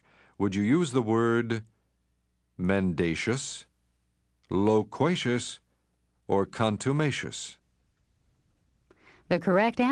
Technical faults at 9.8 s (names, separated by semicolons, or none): call bitrate drop